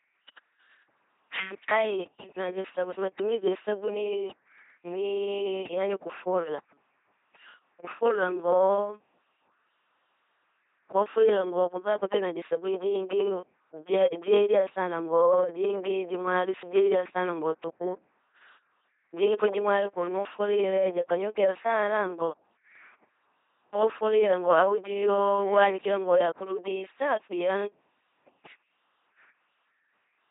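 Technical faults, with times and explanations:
Throughout, LPC-10 vocoder: the speech has a heavily damaged, buzzing, mechanical robot quality with nothing above 3.8 kHz, which fits a 2.4 kbit/s LPC-10 coder. Each moment is rebuilt from a bare pulse train or noise driving a small vocal tract filter, stripping natural texture.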